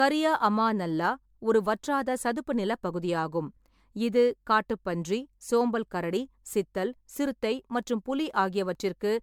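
A speech clip that sounds swirly, smeared and hollow from start to finish, with blurred consonant attacks and nothing above about 19.9 kHz. The likely cause is generation loss, the audio having been through a lossy MP3-style codec several times over, about four passes. What sets it apart from a single low-bitrate encode is that the damage exceeds what a rate near 100 kbit/s would leave on one pass, because each re-encode quantises on a shifted frame grid and stacks new noise and spectral holes.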